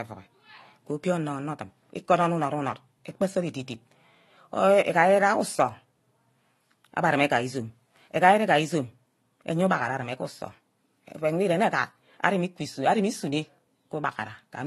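Speech with two faults. Throughout, nothing is heard above 12 kHz, and two different artefact textures sit on top of each other rather than one codec's single signature. This is likely transcoding between lossy codecs, which points to a low-rate AAC stage followed by Vorbis. From 0.19 s to 14.66 s, faint single-sample ticks repeat steadily about ten times a second, regular rather than random dropouts: clock slip clicks, likely from a clock mismatch of roughly 200 ppm.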